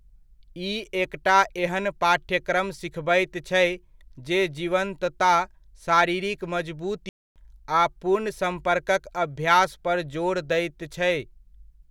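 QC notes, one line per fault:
7.09–7.36 s, playback stall: the speech cuts to silence mid-flow for about 270 ms, then picks up again. The gap is most likely the player running short of buffered data, or its output thread being briefly blocked, before recovering.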